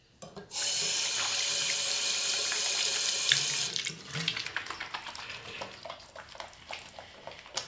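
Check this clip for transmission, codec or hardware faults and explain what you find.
One fault is present: a wrong sample rate from 4.48 s to the end. The audio slows to about 0.73 times speed and drops about 5.6 semitones, consistent with 22 kHz material played at 16 kHz. On a spectrogram the energy shifts downward and stretches in time.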